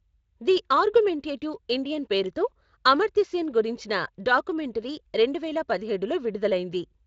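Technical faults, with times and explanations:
No technical faults can be heard in the speech. The Speex coding is working normally, leaving only a light codec colouring and no content above about 7.6 kHz, which points to a wideband setting near 24 kbps.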